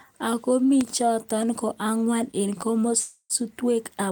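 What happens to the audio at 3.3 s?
At 3.3 s a call audio freeze ends. From 2.98 to 3.33 s the last sound is stretched into a fading buzz or hiss, then about 50 ms of silence, likely because late packets emptied the jitter buffer. Unlike a dropout, nothing is lost. The speech resumes where it stopped, about 0.32 s late.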